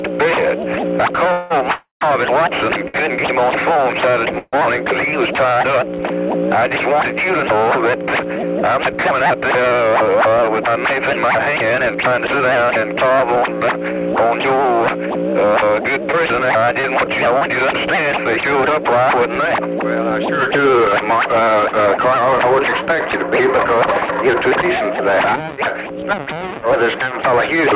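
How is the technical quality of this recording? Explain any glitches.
The recording has clear network-related glitches, all over a band-limited call path with nothing above 4 kHz, which fits G.711 at 64 kbps.

From 1.32 to 4.55 s there are repeated stalls (stutter). Late packets emptied the jitter buffer three times, and the receiver filled 389 ms by continuing the last sound. On a waveform these show as smeared, repeated stretches. The longest lasts 181 ms.

From 1.72 to 2.03 s comes a call audio freeze, 288 ms long. It is likely caused by packets held up in transit. The audio stretches into a fading buzz and then about 130 ms of flat silence before resuming, which leaves a visible blank column on a spectrogram.

From 7.96 to 11.18 s a jitter buffer speed-up plays the audio at 105% speed. The receiver trimmed around 150 ms in pitch-period slices, so the pitch stays steady but the pace sounds hurried.

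From 15.61 to 17.43 s there are scattered short gaps. About five lost packets were patched with tiny continuations, each of them very short. They are heard as brief ticks, and 100 ms of audio is missing, which shows as thin notches in the spectrogram.

From 24.62 to 26.43 s a second jitter buffer speed-up runs at 108% and again removes roughly 150 ms. The audio sounds compressed in time, with no pitch shift.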